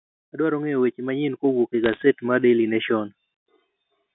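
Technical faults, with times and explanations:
0.36 to 3.0 s, automatic gain rising: the level climbs steadily by about 10 dB over more than two seconds, and the background swells along with the speech instead of the speech alone getting louder. The gain control judged the input too quiet and raised its gain gradually, scaling everything in the signal path together, so the room noise and the voice ride upward as one and the change sounds like a slow swell rather than a step.
1.84 to 2.03 s, bit errors on a digital phone line: a brief burst of crackle and sharp ticks sits over the speech for about a fifth of a second, while the speech itself carries on unchanged beneath it. On this G.711 mu-law line, around half a percent of bits were flipped, and each flipped bit corrupts one sample. Hits on the upper bits, or on the sign of a loud sample, throw a sample far off its true value, which produces a tick, and clustered hits merge into crackle.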